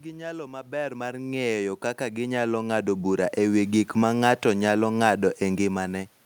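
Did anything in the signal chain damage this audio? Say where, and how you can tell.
Yes. Between 1.97 and 3.87 s, automatic gain rising in the call processing stage lifts the level by about 8 dB. The voice and the room noise swell together over those two seconds, so the gain control, not the talker, is increasing the level.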